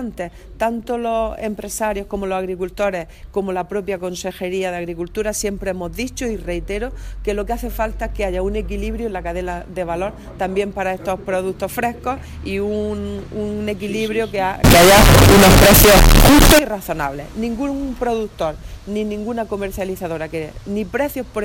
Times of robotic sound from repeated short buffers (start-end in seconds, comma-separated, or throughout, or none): none